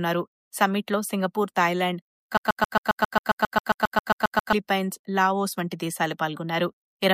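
Right around 2.37 s the audio snags into a broken-record loop: a fragment roughly 0.13 s long repeats exactly, back to back, 16 times until about 4.53 s. It's most likely the player, encoder or stream stalling and re-sending the last chunk it had buffered. Whatever should have played across those two-odd seconds is simply gone, so the sound jumps ahead once the loop releases.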